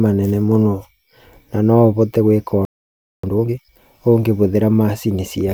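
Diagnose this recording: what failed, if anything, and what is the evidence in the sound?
Playback stage: a playback stall. Just after "ũbote gwĩka" the speech stops dead at 2.65 s and stays silent for 0.58 s, until 3.24 s. The likely cause is the player running out of data or its thread being blocked. Unlike a packet-loss gap, the speech picks up where it stopped.

Playback stage again: time-compressed catch-up. From 3.24 to 3.81 s the speech runs at twice normal speed but keeps its pitch, as short pieces are cut out and cross-faded. A plain sample-rate error would raise the pitch along with the speed.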